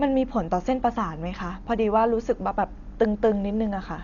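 From start to finish the speech carries heavy codec damage, most likely Dolby Digital compression at a low rate, which fits something around 48 kbps. With that little budget the encoder cuts the band hard, so nothing survives above about 6.9 kHz and everything sounds dull. Many frequency lines get no real detail and are filled back with noise, which leaves a rough, fluttering hiss wrapped around the voiced sounds.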